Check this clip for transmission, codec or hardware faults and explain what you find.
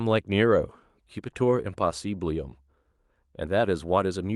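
Nothing that points to a fault can be heard in this speech recording. Careful listening turns up no event anywhere in the audio that would suggest trouble in how it was captured, encoded or delivered.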